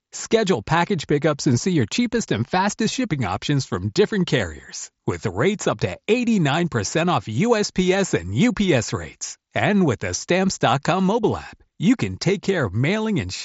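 Nothing stood out on listening to this speech recording, which comes over a Bluetooth mSBC headset link with its top end stopping near 7.7 kHz, as that wideband path does.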